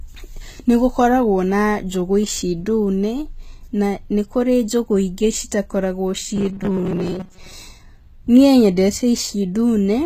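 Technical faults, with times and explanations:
Throughout: HE-AAC compression is the likely cause. Nothing sounds above 14.9 kHz, and the codec damage is plainly audible, which fits a bitrate near 20 kbps. The treble is rebuilt from copied lower bands, so s sounds turn gritty, metallic or lispy.
6.36 to 7.53 s: robotic sound from repeated short buffers, likely. The sound turns into a rigid buzz at 188 Hz. Each repeat lasts about 5.3 ms, and roughly half the audio in this span is repeats rather than new sound.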